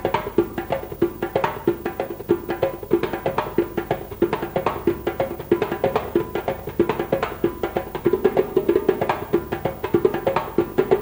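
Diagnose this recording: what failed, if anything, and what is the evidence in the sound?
Clock drift between sender and receiver, at the buffer stage: the sender's clock runs roughly 4 percent fast, so the receiver's jitter buffer keeps overfilling and material must be discarded. The sound carries small, unevenly spaced timing hiccups throughout. On a waveform, splice discontinuities appear; a spectrogram shows faint vertical seams.

Repeated timing corrections run from 0.02 s to 10.89 s, each one a short cut rather than a repeat, so the passage plays at 104 percent speed. Onsets arrive marginally early, and the spectrogram shows tiny gaps in continuity at irregular spacing.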